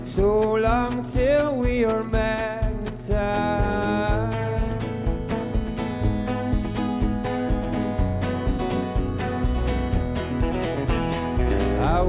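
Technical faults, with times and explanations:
Nothing in this recording stands out as a technical fault at any point, so there's nothing to list here.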